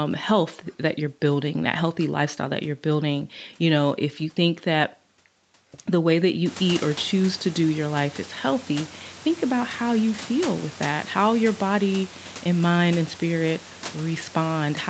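Nothing in this speech recording stood out on listening, apart from the room noise that rises by about 22 dB at roughly six and a half seconds and stays in the background below the speech.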